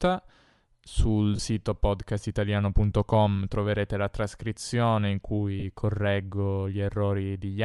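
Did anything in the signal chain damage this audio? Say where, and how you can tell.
Yes, at the codec stage, throughout the 7-second speech clip. The speech has a breathy, grainy edge, and the upper band sounds like noise in place of true detail. That is spectral noise filling, most likely from Bluetooth LC3 compression at a moderate rate, something like 48 kbps, with 10 ms frames. Unlike a plain low-pass or MP3 swirl, the top end is present but textured like hiss that follows the speech envelope.

Lost LE Audio frames, at the network or transport stage, occur twice: 1.36 to 1.39 s, and 5.60 to 5.64 s just after "troverete la trascrizione in". Each gap lasts about 30 ms, which fits three lost 10 ms frames. The decoder conceals each loss by repeating the last spectrum with scrambled phase, so you hear a short noisy smear rather than a hard dropout to silence. That rules out a buffer underrun or a simple click.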